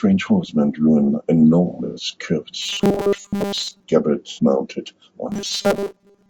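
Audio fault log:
Throughout, low-delay AAC compression: the whole clip has a rough, grainy texture, with noise filling the gaps between the pitch harmonics and a thin, synthetic-sounding top band. The likely cause is AAC-ELD coding at a low rate that fits about 32 kbps. At that low rate it cannot code the harmonics cleanly. Unlike concealment, this damage is steady and never comes and goes.
1.67 to 2.05 s and 4.31 to 4.39 s, AAC frame loss with concealment: the decoder filled missing frames by reshaping the last good spectrum. In the first span, about 210 ms is lost in patches spread over 300 ms, with the longest gap roughly a tenth of a second, which fits seven lost frames. The sound turns smeared and noisy there. The second loss is 60 ms, a brief phasey blur. Both are short, irregular patches with no fixed pitch, which sets them apart from the buzz below.
2.62 to 3.84 s and 5.30 s to the end, robotic sound from repeated short buffers: audio likely arrives too seldom, so roughly 70 percent of each span is replayed 5 ms fragments while the real signal is skipped. 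The replay imposes a rigid 200 Hz metallic buzz that still roughly follows the speech contour. That steady, pitched drone marks it apart from the noisy, unpitched concealment smears.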